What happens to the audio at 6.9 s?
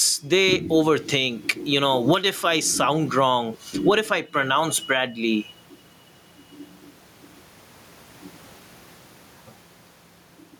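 Gain pumping is audible at 6.9 s, as it is throughout the clip. The level appears to swing by something like 15 dB, most likely because the microphone gain is set far too high and a fast limiter or compressor clamps down on each loud syllable. The room noise sits about 44 dB below the speech, and loud and soft parts end up closer in level, leaving the speech squashed.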